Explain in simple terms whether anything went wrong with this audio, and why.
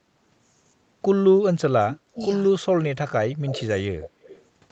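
The voice dips sharply and partly drops out from 1.7 to 2.22 s, 2.49 to 2.7 s, and 3.06 to 4.19 s. This is speech suppressed in double talk. Both sides were likely talking at once, and the call's echo canceller turned this voice down along with the echo.

Faint, delayed repeats of the voice slip through at 2.21, 3.48 to 3.65, 4.01 to 4.09 and 4.26 to 4.43 s. This is an echo leak. The first arrives about 0.18 s late, the rest about 0.25 s late, probably because a loudspeaker's sound reached a microphone and was not fully removed.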